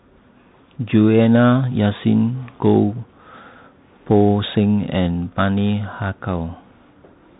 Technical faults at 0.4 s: Bluetooth CVSD headset codec

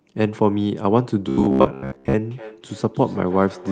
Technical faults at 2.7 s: feedback echo between two devices

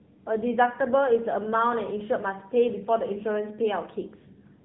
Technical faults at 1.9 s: AMR narrowband mobile codec

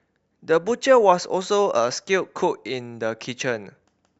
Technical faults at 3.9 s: clock slip clicks

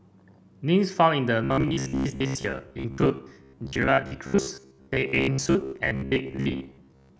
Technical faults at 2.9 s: robotic sound from repeated short buffers

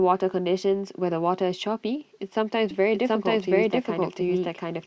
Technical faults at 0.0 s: none

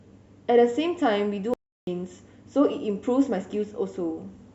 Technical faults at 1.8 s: audio dropout to silence

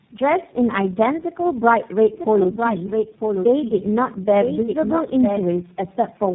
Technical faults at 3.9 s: tandem speech coding; doubled audio track

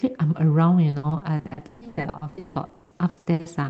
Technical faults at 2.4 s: repeated packet loss (robotic sound)

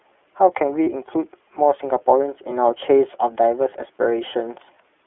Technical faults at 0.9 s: iLBC codec; lost iLBC frames

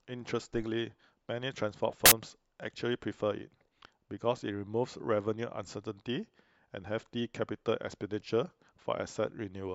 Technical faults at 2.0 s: corrupt FLAC frame

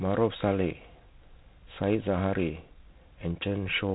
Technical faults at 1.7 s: G.726 ADPCM

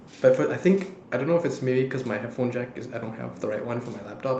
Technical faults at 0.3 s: none

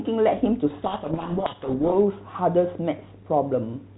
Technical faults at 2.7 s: none

